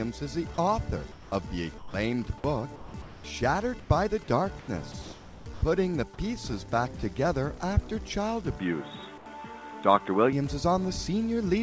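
From 0.54 to 1.94 s and again from 2.76 to 5.62 s the sound is chopped by the voice detector, likely switching on and off. About 400 ms and 680 ms are replaced with smooth noise, so the waveform shows flat, even patches where the sound's edges should be.

From 8.59 to 10.33 s the input has switched to a poorer device, likely a narrower microphone path. The spectrogram cuts off sharply at 3.8 kHz instead of 8 kHz, and the sound turns dull with no gap or level jump.

Within that stretch, from 9.18 to 9.26 s, comfort noise replaces the background, likely from discontinuous transmission. It is a featureless, about 5 dB quieter band with no texture on the spectrogram.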